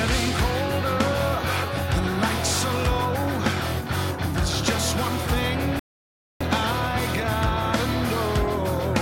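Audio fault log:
5.79–6.41 s, rebuffering stall: playback runs out of data and falls silent for 0.61 s, then resumes exactly where it stopped; a flat waveform gap and a blank spectrogram column.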